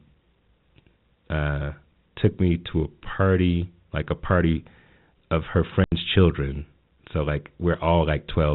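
At 5.84 s the speech drops out completely until 5.92 s, a hole of 80 ms caused by packet loss filled with silence. The receiver got nothing for that span and played silence instead of concealing it, so the edges are hard. The length points to several consecutive 10 ms packets being lost. No repeated or smeared fragment bridges the gap, which distinguishes it from concealment. The narrowband G.711 telephone sound continues unchanged on either side.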